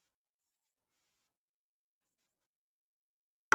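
From 1.81 s to the end, processing that likely squeezed the audio to fit a shorter length has cut short pieces out while holding pitch. This time-stretched section runs about 1.71 times faster, so the speech turns abruptly rushed at unchanged pitch.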